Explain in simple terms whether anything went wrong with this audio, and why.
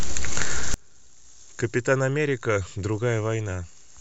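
From about 0.74 s to the end, the speech nearly vanishes, leaving only a faint trace. The likely cause is one channel inverted, so the two stereo sides cancel when combined. Unlike a dropout, the sound never goes fully silent.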